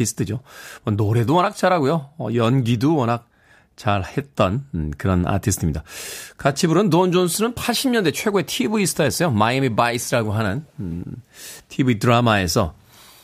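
A speech recording, with nothing technically wrong with it.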